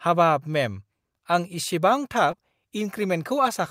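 At 2.31 to 2.35 s the speech briefly smears: short concealed packet loss, about 20 ms of audio missing, patched by extending the preceding sound.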